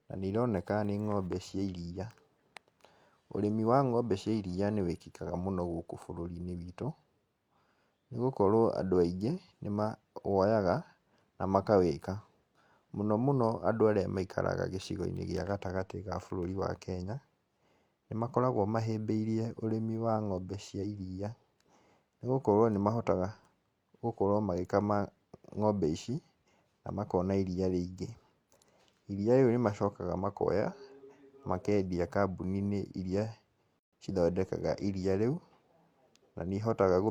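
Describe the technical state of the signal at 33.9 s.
A gap at a join of encoded pieces runs from 33.79 to 33.93 s: separately encoded pieces keep their start delay and end padding, opening a 135 ms silence with smeared edges before speech resumes with "cithondekaga iria rĩu".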